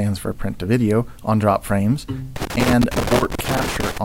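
From 2.36 s to 3.98 s the sound is broken up by loose connector crackle: an irregular burst of scratching as a worn contact makes and breaks, chopping the signal. Its ragged, uneven timing separates it from evenly spaced digital clicks or buffer dropouts.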